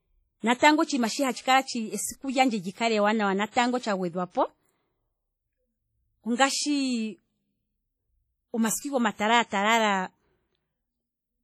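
Throughout the speech, a low-bitrate transform codec, likely WMA compression at a rate that fits roughly 32 kbps, has coarsely quantised long blocks and zeroed weak spectral detail. The damage is heavy: a ringing, washy tone with hiss that swells and fades with the speech.

From 0.59 to 0.62 s comes pre-echo. A sharp attack landed late in a coding block, so quantisation noise meant for the loud onset was spread across the quiet 33 ms before it. A brief hiss leads the attack, which sounds softened and smeared.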